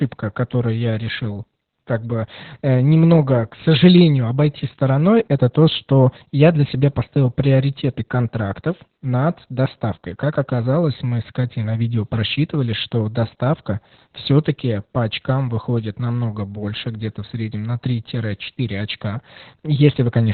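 Throughout the 20-second speech clip, Opus voice compression in its SILK mode narrows the band to telephone width, with nothing above about 4.3 kHz, and codes the excitation so coarsely that voicing turns hoarse and faintly robotic. The damage is heavy and fits a bitrate near 8 kbps. Unlike a simple low-pass filter, which only dulls the sound, this adds a rough, buzzy graininess inside the remaining band.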